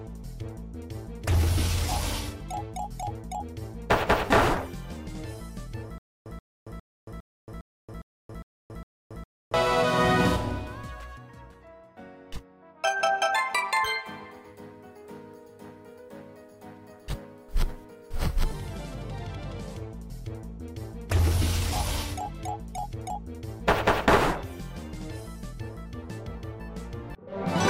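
From 5.98 to 9.54 s, a stutter with silent gaps: a 130 ms fragment repeats eight times, with about 277 ms of silence between, likely a stalled stream.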